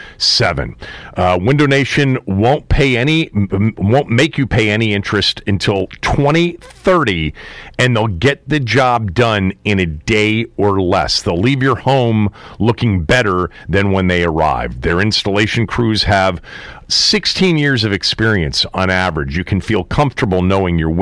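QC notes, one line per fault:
Nothing stood out on listening, and there is no fault to log for this clip.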